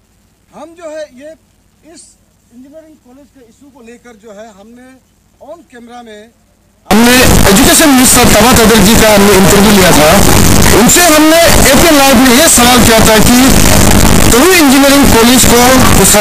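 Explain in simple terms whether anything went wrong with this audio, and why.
Something went wrong from 6.91 s to the end, most likely a mix-up between signed and unsigned sample formats. The 8-bit samples were probably read with their sign handled the wrong way, which flips the top bit of every value. Every point where the waveform passes through zero then jumps across the full range. The sound becomes loud, harsh distortion, and quiet stretches blast out as loudly as everything else. Before 6.91 s, the 8-bit audio plays back normally.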